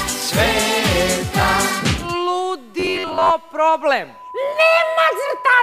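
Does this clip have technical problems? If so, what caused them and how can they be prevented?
Yes. From 2.80 to 3.32 s the sound turns into a rigid metallic buzz at 93.8 Hz, which is robotic sound from repeated short buffers. The likely cause is audio arriving too seldom, so a chunk of about 10.7 ms is looped to fill the gaps and most of the real audio in that span is skipped. Preventing it calls for a larger playback or jitter buffer and higher-priority, steadier audio scheduling so new data arrives on time.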